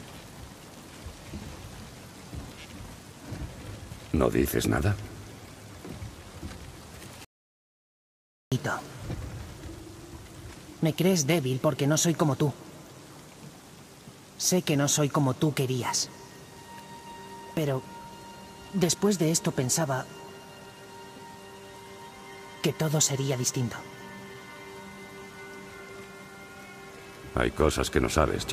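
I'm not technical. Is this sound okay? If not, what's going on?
No. The audio input was likely cut off for a moment, leaving an audio dropout to silence: from 7.25 to 8.52 seconds, about 1.3 seconds goes completely dead.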